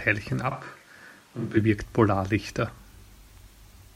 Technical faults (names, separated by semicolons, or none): switch to a distant microphone